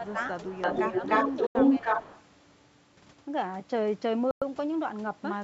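From 0.0 to 0.17 s and again at 1.80 to 1.86 s, the speech dips by a few decibels, likely speech suppressed in double talk as the echo canceller ducks both its own talker and the loudspeaker echo. From 0.07 to 2.23 s a copy of the voice trails about 303 ms behind at about 5 dB relative to the speech, likely an echo leak from a loudspeaker path. At 1.47 s (86 ms) and 4.31 s (107 ms), the audio drops to silence and resumes, likely a Bluetooth stall as the headphone buffer ran dry, within a band that ends at 8 kHz.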